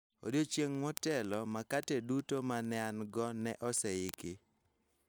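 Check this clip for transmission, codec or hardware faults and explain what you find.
The clip has a clock synchronisation fault on a digital link. Word clock ticks run from 0.12 s to 5.04 s, a regular series of ticks roughly every 0.05 s, around a hundred in all across the speech. The receiving device is running on its own clock rather than locking to the sender's, and the rate points to a clock mismatch of roughly 500 ppm. Each time the two clocks slip past each other, a single sample is dropped or repeated, and that small discontinuity is heard as a tick, about twenty per second.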